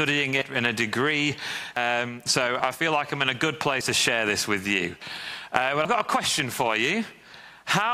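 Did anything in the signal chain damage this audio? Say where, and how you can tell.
Yes, at the driver/buffer stage: forward jumps at 0.42, 1.77, 2.60, 3.81, 5.02 and 5.85 s, each skipping roughly 50 to 150 ms, likely dropped buffers (overrun).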